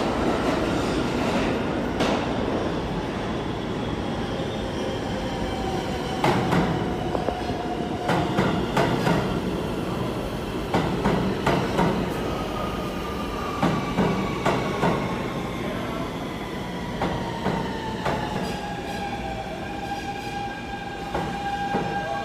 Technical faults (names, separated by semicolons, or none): damaged data in a compressed stream